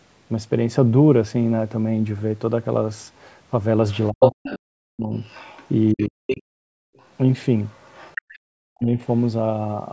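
A speech clip, band-limited to 8 kHz by call microphone processing. The other side's voice leaking through is heard at 3.89 to 4.58 s, about 5 dB louder than the talker. It returns at 5.17 to 6.41 s, about 15 dB down, and faintly at 6.97 to 7.06 s. It comes back again at 7.66 to 8.39 s, about 25 dB down. This is likely loudspeaker echo the canceller left behind. Speech is suppressed in double talk at 4.11 to 5.13 s, 5.94 to 6.82 s and 8.43 to 8.99 s. The talker dips by as much as about 40 dB there. Both sides overlap in these spans. The canceller likely turned everything down together.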